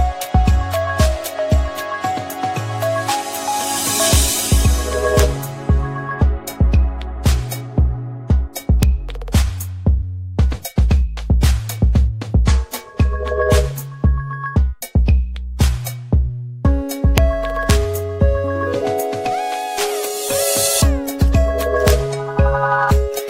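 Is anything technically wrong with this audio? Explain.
Yes. Six violent, sharp cracks punch through the loud moments, far harsher than ordinary clipping: at 4.13–4.16 s, 5.20 s, 8.83 s, 17.18 s, 17.70 s and 21.88–21.90 s. This is integer overflow. Peaks pushed the signal only about 0 to 1 dB past the largest representable integer, and instead of being held at the limit, those samples wrapped around to the opposite extreme. Each overshoot therefore swings across the full range at once, producing a cracking snap.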